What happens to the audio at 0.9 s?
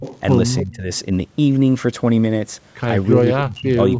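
At 0.9 s the speech is just leaving a dip that runs from 0.63 to 0.91 s: speech suppressed in double talk. The level falls by up to about 20 dB and the voice thins and partly drops out, likely because an echo canceller mistook this talker for loudspeaker echo while the far side spoke. A waveform shows the envelope pinching for roughly a third of a second; a spectrogram shows fading, gapped harmonics until energy returns.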